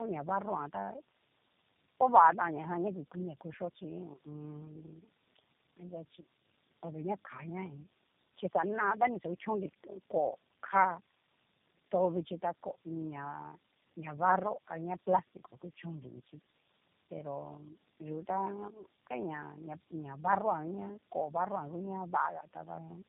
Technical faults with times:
0.00-23.09 tandem speech coding

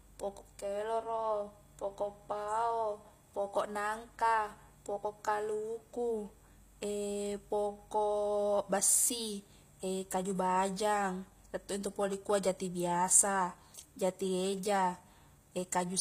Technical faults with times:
0.00-16.01 HE-AAC compression

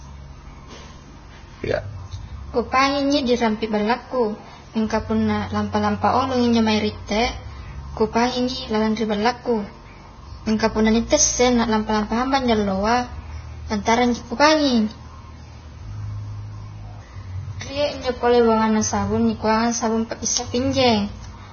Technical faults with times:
0.00-21.52 Vorbis compression
12.03-12.18 loud pop

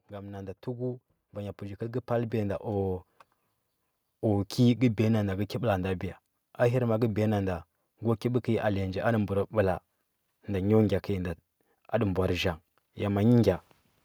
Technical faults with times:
0.07-3.10 automatic gain rising

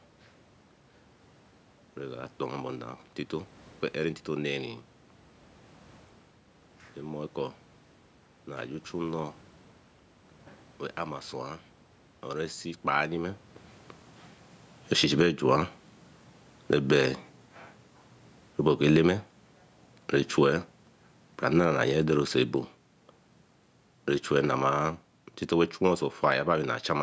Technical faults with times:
12.79-26.50 automatic gain falling

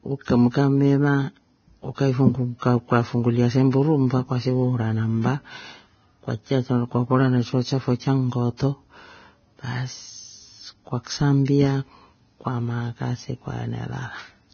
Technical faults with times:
0.00-14.54 Vorbis compression

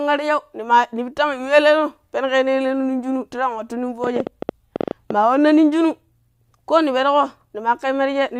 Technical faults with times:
4.04-5.11 train of clicks

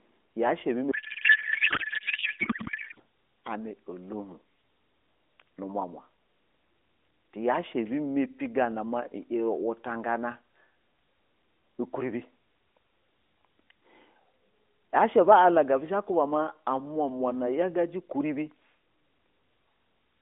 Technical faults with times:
0.92-3.00 codec payload misread

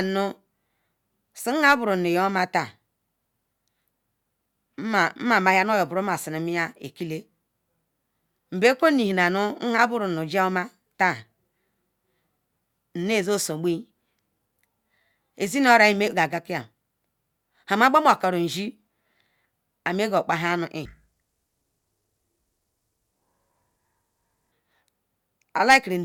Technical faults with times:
20.85-24.52 stereo read as mono

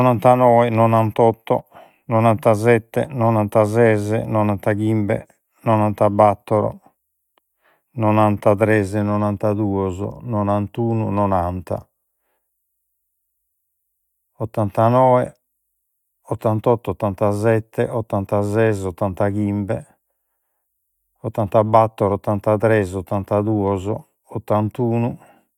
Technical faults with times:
none

